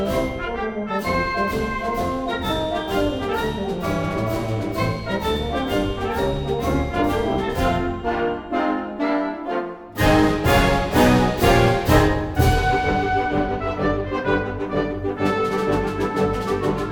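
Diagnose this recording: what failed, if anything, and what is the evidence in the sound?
Nothing failed here: no stage from wiring through playback shows a fault that can be heard anywhere in the recording.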